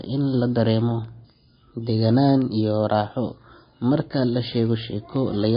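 A receiving device running on its own clock, not locked to the sender's, is slipping against the incoming digital stream in this speech clip. The mismatch is roughly 200 ppm, so the two clocks slide past each other about every 0.15 s, and at each slip a single sample is dropped or repeated. The result is word clock ticks: a train of sharp clicks of uneven strength at a steady rate, some forty of them, running from 0.17 s to 5.54 s. Separately, the audio has likely been through MP3 compression at a starved bitrate, and the plainly audible damage points to something near 26 kbps. Short of bits, the encoder has cut the treble so that nothing remains above 5.1 kHz, and it switches weak frequency lines on and off from frame to frame. That leaves the speech dull and watery, with a swirling quality, chirpy s sounds and smeared consonant attacks.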